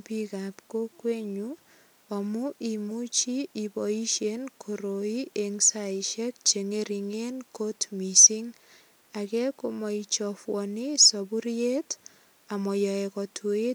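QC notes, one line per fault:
The signal holds steady at a consistent level and bandwidth across the whole clip, with no dropouts, discontinuities or level jumps to report.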